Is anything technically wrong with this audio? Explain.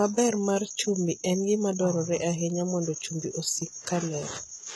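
Yes. All the way through, the speech has a gritty, metallic top end. Esses come out lispy, and nothing reaches above about 11.8 kHz. That's most likely HE-AAC compression. The codec keeps only the lower spectrum and rebuilds the treble by copying lower bands upward under a coarse envelope, so the highs sound artificial and their harmonics don't match the real ones. The damage is heavy, which fits a low bitrate of around 16 kbps.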